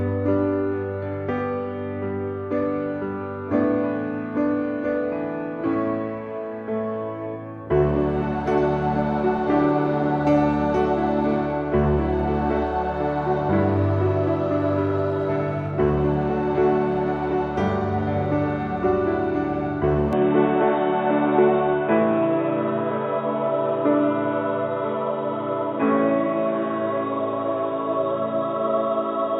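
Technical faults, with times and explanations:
20.13 to 29.39 s, input switched to a poorer device: from 20.13 s to the end, nothing is heard above 3.8 kHz, so the sound turns dull and boxy with no gap at the change. It likely comes from the recording jumping to a narrower-band microphone or headset profile. Unlike a plain low-pass filter or EQ change, the cut arrives together with a new background noise about 35 dB below the signal and a level shift of about 5 dB.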